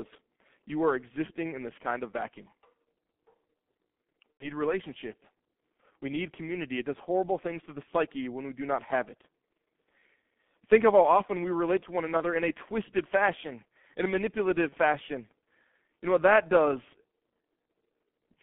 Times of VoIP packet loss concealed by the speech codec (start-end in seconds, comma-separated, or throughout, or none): 4.32-4.50, 12.17-12.23, 14.69-14.75